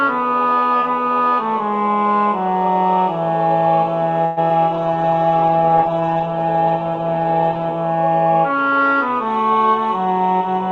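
There are three problems in this audio, all bunched up after the four-second mark. First, from 4.25 to 4.39 s there's what sounds like a call audio freeze: the last bit of sound gets stretched into a fading buzzy tail for about 115 ms, with no true silence and nothing actually lost. That's most likely packets stalling in transit and the jitter buffer running dry, so the receiver fills in until they turn up. The audio then carries on where it left off, just pushed about 115 ms later. Right after that, around 4.49 to 4.52 s, there's a short concealed packet loss. Roughly 20 ms of real audio never made it to the decoder, and the receiver papered over it by extending the previous sound briefly before blending back in. You hear it as a quick smear or wobble rather than a gap. Then from 4.75 to 7.76 s there's a call bitrate drop. The encoder falls from 128 kbps to 10 kbps and sits at the bottom for nearly three seconds, with the bandwidth shrinking from 20 kHz to 8 kHz. 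So that whole stretch goes muffled and rough, with the top end gone and a watery coarseness, until the rate climbs back.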